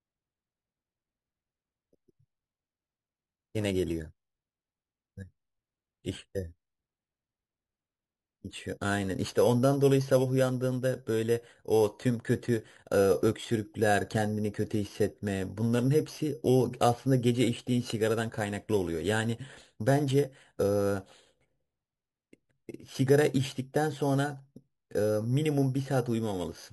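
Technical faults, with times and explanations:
Throughout, imaging from sample-and-hold upsampling: repeated, unsmoothed samples, which fit an 11 kHz source, mirror the speech into 5.5 to 11 kHz as a metallic fizz about 21 dB down.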